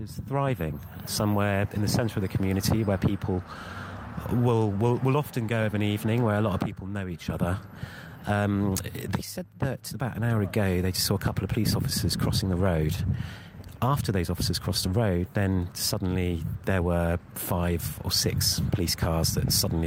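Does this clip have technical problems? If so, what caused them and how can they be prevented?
No, there are no technical faults to report here, so nothing needs tracing or preventing.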